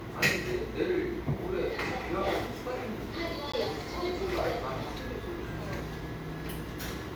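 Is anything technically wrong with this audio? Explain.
Yes. At 3.52 s there is a gap between stream segments: a hole of about 15 ms where the sound drops abruptly to silence and then resumes just as abruptly. It arises where the timestamps of two consecutive segments leave a small space between them, which fits 6-second segments. The player fills that space with silence, so nothing is removed; the following sound is simply pushed back by roughly 15 ms.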